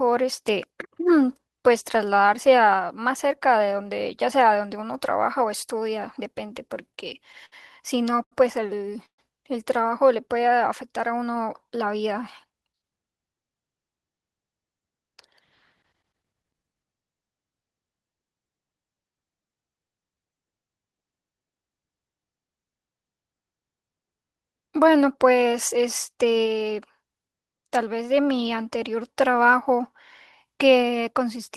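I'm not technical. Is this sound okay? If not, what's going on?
No, there are four problems in this recording, all from audio arriving unevenly over a network.

Repeated stalls (stutter), from 6.67 to 8.34 s: the speech keeps catching and dragging. The network delivered the sound in late, uneven bursts, so the receiving end ran out of audio ten times in under two seconds. Each time, it held on to the last bit of sound until more arrived. Each stall lasts up to 81 ms and together they add about a quarter of a second. Nothing is lost, but the speech sounds halting.

Call audio freeze, from 9.06 to 9.20 s: the speech stops for about 128 ms, most of which (about 90 ms) is near-silence, and then picks up exactly where it left off. The likely cause is a short hold-up in delivery that emptied the receiver's reserve, so it briefly stretched the last sound and then went quiet while it waited. No speech is missing, but a small pause has been inserted.

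Jitter buffer speed-up, from 12.44 to 13.55 s: the speech runs noticeably fast, about 114% of normal, while the pitch stays the same, so it sounds hurried. The receiver had a backlog of delayed audio. To catch up, it snipped out many tiny slices, each one or a few vocal vibrations long, and trimmed away roughly 150 ms in total.

Jitter buffer slow-down, from 18.94 to 20.15 s: here the opposite happens. The speech plays at about 93% speed with the pitch unchanged, so sounds come out slightly drawn out. The receiver's reserve was running low, or it had just decided to keep more in reserve, so it repeated tiny slices of the sound many times to build up a cushion. That added 91 ms to this stretch.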